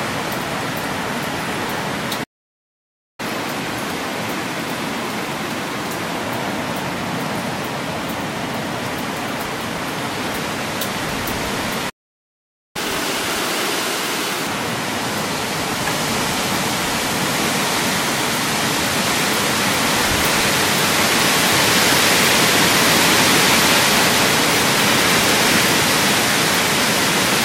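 At 2.23 s the sound halts mid-flow and stays silent until 3.20 s, then at 11.89 s again until 12.76 s, pauses of about 0.95 s and 0.85 s. This is a playback stall, likely the player starving for data or its thread being blocked.

Each stall is followed by catch-up at higher speed. The player resamples its backlog faster: 1.1 times from 3.20 to 6.20 s, raising pitch about one and a half semitones, then 1.5 times from 12.76 to 14.47 s, roughly seven semitones up. Unlike drifting wow, the rise is steady and then returns to normal.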